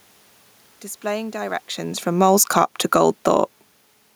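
From 2.06 s the speech and the room noise behind it sink together, easing down by about 5 dB until 3.25 s, so the level drop can't be a talker backing away from the microphone, as happens around one and a half and three and a half seconds, where only the voice shifts. This is automatic gain falling: the gain control judged the input too loud or its background noise too strong and wound its gain down gradually, carrying the background down with the voice.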